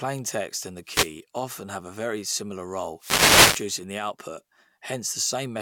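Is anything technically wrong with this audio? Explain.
Yes. Two wireless microphone noise hits, swishes of static, occur at 0.85–1.13 s, after "and the", and 2.98–3.67 s, after "very similar": the FM radio link faded as reflections cancelled, letting receiver noise surge in.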